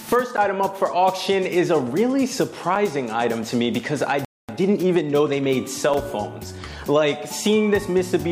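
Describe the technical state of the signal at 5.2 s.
At 5.2 s the audio is in a time-compressed catch-up, running from 4.49 to 5.43 s. The player trims and cross-fades small pieces to clear its backlog. Sound plays 1.25 times fast at normal pitch.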